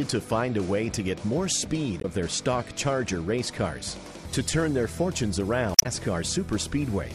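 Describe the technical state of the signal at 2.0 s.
At 2.0 s the compressed stream carries damaged data, spanning roughly 1.97 to 2.05 s, about 75 ms. Bytes in that stretch of the encoded file were lost or corrupted, so the decoder misreads or rejects the affected frames, loses sync, and hunts for the next valid frame header before resuming. In the sound this comes through as a brief chirp or squawk-like blip that breaks the flow for that instant.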